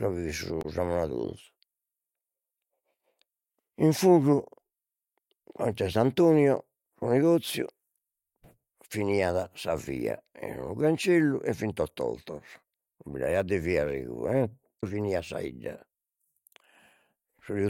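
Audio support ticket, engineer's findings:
Damaged data in compressed stream, 0.59–0.65 s and 14.77–14.84 s, just before "finiat sa": short glitch bursts, ~64 ms each. Probable component: decoder input. Corrupt bytes in the frames; decoder misreads them, loses sync, resyncs on the next frame header.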